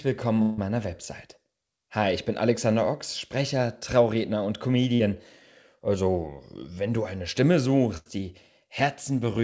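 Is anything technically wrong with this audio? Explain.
Yes, there are three gaps where audio was lost and filled in.

From 0.42 to 0.60 s, a long network dropout is the likely cause. About 160 ms never arrived. The receiver stretched the last sound across the hole, so it smears into a buzz or hiss before the audio resumes further on.

From 4.96 to 5.01 s there is short concealed packet loss. About 40 ms went missing. The decoder continued the previous sound and blended back, leaving a brief smear or wobble.

From 7.97 to 8.08 s comes a burst of packet loss. Roughly 80 ms was dropped. The receiver held the last sound as a fading buzz or hiss, then jumped ahead, skipping the lost part.

All of this travels through a call path that fits a G.722 codec at 64 kbps, with nothing above 8 kHz.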